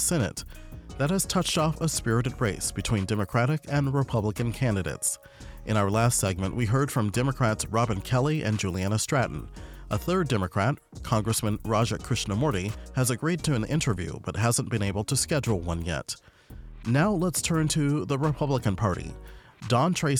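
No technical faults can be heard anywhere in the audio, and the signal stays steady and intact throughout.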